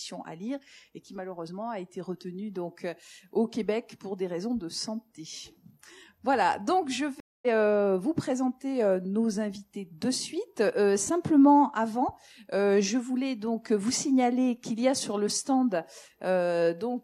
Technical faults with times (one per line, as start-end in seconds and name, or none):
7.20-7.47 stream reconnect